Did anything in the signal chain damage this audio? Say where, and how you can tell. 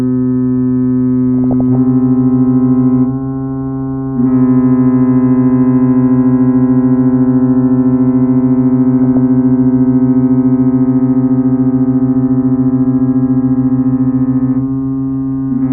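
Yes. DAB burbling hits the codec stage from 1.38 to 1.75 s and from 9.04 to 9.17 s. Short blips of noise sit in single sub-bands over the sound. Weak reception let bit errors, around 0.2 percent, slip past error correction. Corrupted scale factors make MP2 sub-bands jump in level for up to a frame.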